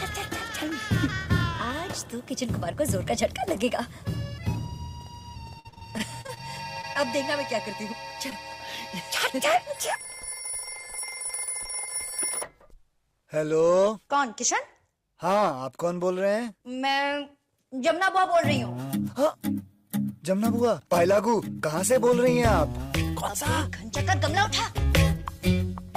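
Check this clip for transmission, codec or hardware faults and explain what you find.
Yes, there are transmission faults, both from lost packets.

Repeated packet loss (robotic sound) runs from 5.59 to 6.41 s. Ten separate gaps, the longest 51 ms, were each patched by extending the preceding audio. About 29% of that stretch is filled-in sound, making it choppy and robotic.

Short concealed packet loss occurs at 6.81–6.85 s, 6.93–7.02 s and 8.30–8.33 s. Each time about 20 ms went missing and was filled by continuing the last sound, leaving a brief smear or wobble.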